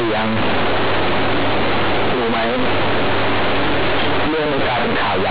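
Companded audio read as linear, throughout: mu-law telephone bytes are played as plain 8-bit samples without expansion, so the speech becomes harsh, buzzy, overloud distortion with heavy noise between phrases.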